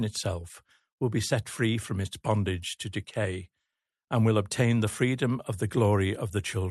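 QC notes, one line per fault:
No faults logged; the speech sits in a call path whose top end stops around 12 kHz, as expected of an Opus link at that bandwidth.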